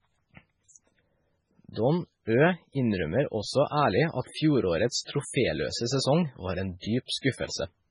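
From start to finish there's heavy damage that sounds like MP3 compression, likely at a very low bitrate, around 16 kbps. Everything above 10.5 kHz is gone, and with too few bits, weak frequency detail flickers between frames, so the speech turns watery and swirly, with smeared consonants.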